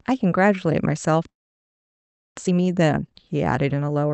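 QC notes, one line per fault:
1.29–2.40 s, long network dropout: the sound trails off into a short fading buzz, then falls silent for about a second, and returns with roughly 0.6 s of material gone. The likely cause is a run of packets that never arrived, covered briefly by concealment before it gave out.
2.43–4.10 s, jitter buffer speed-up: the speech runs hurried, about 126% of normal speed, with its pitch unchanged. After the gap the receiver was holding around half a second of surplus delay and sheds it by repeatedly cutting out pitch-period-sized slices.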